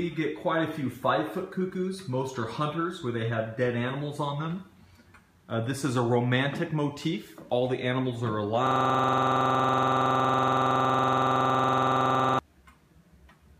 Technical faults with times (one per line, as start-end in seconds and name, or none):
8.67-12.39 system hang loop